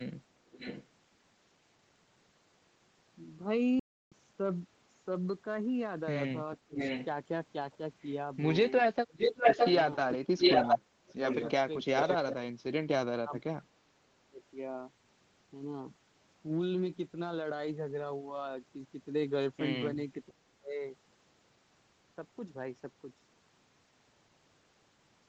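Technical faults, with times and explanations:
0.47 to 12.35 s, echo leak: a delayed copy of the speech returns at 0.47 to 0.87 s, 6.55 to 7.77 s and 8.69 to 12.35 s. It trails by 608 ms, then 714 ms. It starts faint, nears the speech level, and finally rises slightly above it. This is likely a loudspeaker on one side whose echo canceller let its pickup back into the call.
3.79 to 4.12 s, playback stall: the sound cuts to silence mid-flow for 0.32 s and then resumes. The gap most likely comes from the player running out of buffered data or having its thread blocked until it recovered.
6.65 to 20.82 s, speech suppressed in double talk: the talker's level dips sharply, by roughly 25 to 30 dB at its deepest. This happens briefly at 6.65 s, across about 3 s between 9.97 and 14.4 s, and for about half a second at 20.32 to 20.82 s. It is likely the echo canceller mistaking overlapping talk for echo and attenuating both.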